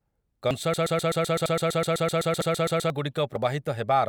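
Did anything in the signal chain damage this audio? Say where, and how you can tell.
Yes. The speech has audio missing between chunks at 0.51, 1.46, 2.41 and 3.36 s, each a skip of a few tens of milliseconds. On a waveform each is an abrupt seam with no silence; on a spectrogram, a vertical discontinuity. The spacing points to a 1-second chunked recorder or buffer stage, which likely drops audio at each handover.

A broken-record loop runs from 0.74 to 2.9 s, where a 127 ms fragment repeats 18 times back to back. A spectrogram shows the same pattern tiled identically, and the waveform shows identical periods. This points to a playback or streaming stage that likely stalled and resent its last buffer, losing the audio that should have played.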